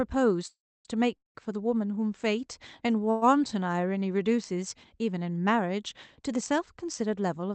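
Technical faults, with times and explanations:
0.47–0.88 s, 1.17–1.38 s and 3.11–3.25 s, call audio freeze: each time the sound stalls into a buzzy or hissy hold of its last moment, fading to silence in the first two (about 300 ms and 150 ms of silence). The third stays as fading buzz or hiss for 108 ms. The speech then resumes where it stopped, with nothing lost, just later. This is likely a jitter buffer running dry. On a spectrogram, smeared horizontal streaks decay, to a blank gap in the first two. The waveform shrinks, to a flat line in the first two.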